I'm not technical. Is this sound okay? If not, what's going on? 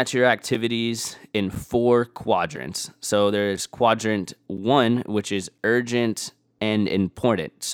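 No, there is a fault called a gap between chunks. The speech reaches you in one-second pieces, and a tiny silence, about 7 milliseconds long, sits at each join. Nothing is missing, but the sound briefly stops at 0.55, 1.55, 2.56, 3.57, 4.57 (just before "which is urgent"), 5.58 (right after "which is") and 6.59 seconds (right after "which is urgent"). The steady once-a-second rhythm gives the speech a regular stutter.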